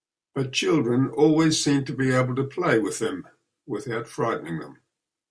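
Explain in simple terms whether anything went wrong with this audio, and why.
Nothing went wrong here; no audible fault turns up anywhere in the speech.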